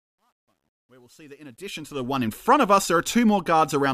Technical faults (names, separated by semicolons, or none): truncation distortion on a fade